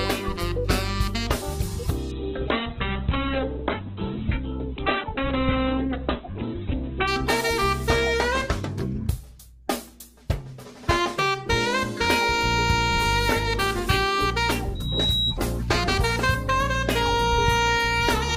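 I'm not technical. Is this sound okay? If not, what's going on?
No. From 2.14 to 7.17 s there is a call bitrate drop: the connection briefly squeezed the audio into far less data, so detail was discarded and everything above about 4 kHz was cut off. The sound turns muffled and rough until quality recovers.

From 14.75 to 15.40 s there is a loudspeaker feedback squeal: a microphone picked up its own loudspeaker, and the sound looped round and grew. A single high whistle near 3.8 kHz swells over about a third of a second until it is roughly as loud as the sound itself.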